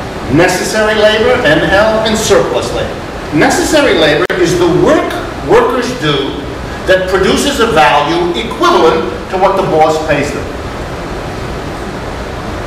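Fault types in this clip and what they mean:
Gap at a join of encoded pieces: the audio was encoded as separate segments and spliced without removing the encoder's start-up delay and final-frame padding, so that dead air remains at the seam. Here continuous sound drops out at 4.26 s for about 43 ms, ending at 4.30 s, with edges smeared by the codec, and then picks up exactly where it left off rather than skipping ahead.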